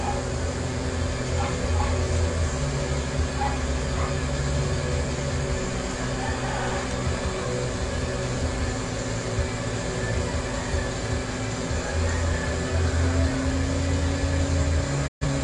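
The audio has a digital broadcast dropout near the end. At 15.06 s the sound fades out over about 20 ms and stays silent until 15.26 s. The receiver muted because frames failed or went missing. About 128 ms of programme is lost, which fits three lost frames.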